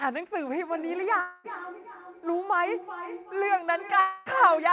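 From 0.6 s to the end, each phrase returns about 400 ms later, thinner and ringing, peaking at about -12 dB relative to the speech. This is feedback echo between two devices: a second device in the room replays the call and the first device's microphone picks it up again. From 1.2 to 1.46 s and again from 4.0 to 4.28 s, the sound smears into a fading buzz for roughly a quarter second before speech resumes further on, likely a long network dropout concealed by the receiver. Throughout, nothing is heard above 4 kHz, which fits a narrowband G.711 call path.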